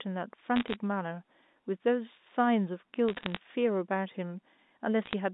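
Bit errors on a digital phone line, flipping bits in individual A-law samples between 0.56 and 0.76 s, 3.08 and 3.38 s, and 5.02 and 5.13 s, scatter sharp ticks and crackle over the band-limited telephone speech.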